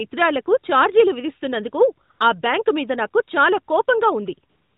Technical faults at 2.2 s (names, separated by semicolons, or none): AMR comfort noise